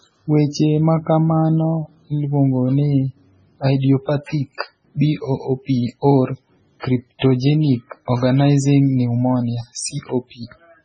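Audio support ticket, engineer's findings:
Encoder starved of bits, likely heavy MP3 compression at a very low bitrate, around 16 kbps. Treble cut at 10 kHz, nothing above. Weak frequency lines dropping in and out between frames: watery, swirly speech, metallic chirp on sibilants, smeared consonant onsets.

Pre-echo at 6.80 s, spread 38 ms. Transform block spreading quantisation noise from a sharp attack back into the quiet before it. Brief hiss ahead of the onset, attack soft. Pre-echo again at 7.19 s, spread 32 ms. Same block-level noise smear, short hiss leading a blunted attack.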